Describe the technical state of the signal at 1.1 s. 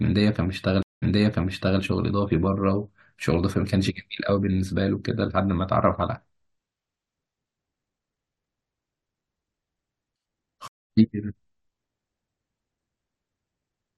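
At 1.1 s the speech sits inside a stream reconnect spanning 0.83 to 1.81 s: about 0.19 s of dropout, then a fresh decoder restarts 0.79 s earlier, so a waveform gap is followed by a repeated stretch.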